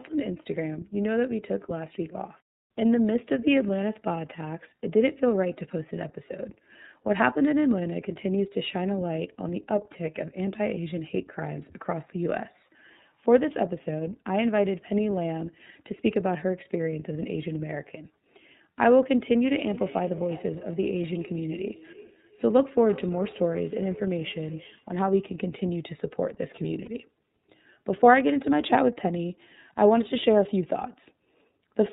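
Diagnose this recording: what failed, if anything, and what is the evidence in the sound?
The fault is at the codec stage. Throughout the clip, the speech has nothing above 4 kHz and sounds rough and slightly synthetic. The coding damage is plainly audible. This is the iLBC codec, a narrowband VoIP coder. It codes each frame independently, and the quality fits its 30 ms frame mode at about 13.3 kbps.

There is also a fault at the network stage. From 26.85 to 26.89 s, the speech briefly turns into a held, slightly buzzy vowel. These are lost iLBC frames. The decoder filled the gap by repeating the last pitch cycle mixed with noise. The gap fits a single lost 30 ms frame. The speech recovers at once.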